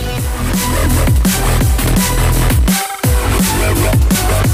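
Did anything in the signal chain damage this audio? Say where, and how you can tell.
Yes. From the start to 1.89 s there is an unreliable data bit at the converter or digital interface: one marginal data line flips its bit in a random share of samples, so each error adds a spike of identical size, about -16 dBFS. The result is a steady crackle that continues through pauses. Analogue hiss would be smooth noise, and clipping would follow the loudness of the sound. These spikes are all the same height and stop abruptly at 1.89 s.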